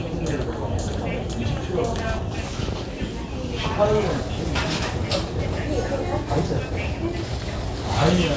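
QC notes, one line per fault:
Nothing stood out on listening to this audio.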